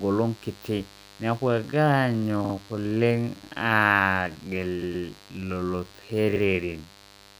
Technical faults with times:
0.00-7.39 mains buzz
1.44-7.39 time-stretched section
2.44-2.53 repeated frames
4.81-5.05 repeated frames
6.35-6.42 repeated frames

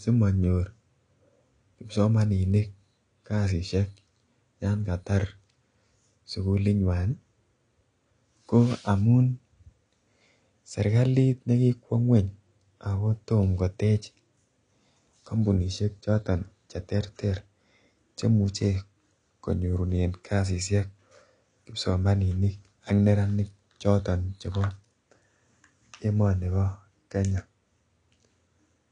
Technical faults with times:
0.00-28.92 low-bitrate audio saved at a high bitrate

